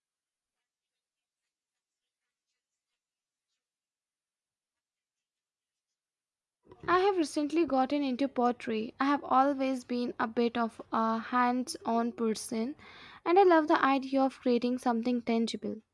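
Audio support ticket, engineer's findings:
No transport or processing faults found on the signal path; the speech arrives continuous and intact, with nothing requiring action from the engineering side.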